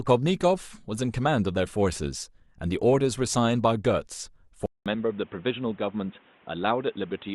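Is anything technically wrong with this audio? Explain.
Yes. At 4.66 s the speech cuts out for about 200 ms and returns dull and boxy, with nothing above 3.8 kHz, a few decibels quieter, and over a new, faint background noise. It stays that way to the end. This is likely an input switched to a poorer device, where recording moves to a narrower-band microphone or a headset call profile. A simple low-pass filter or a codec bandwidth drop would not also bring the gap, the level change and the new noise.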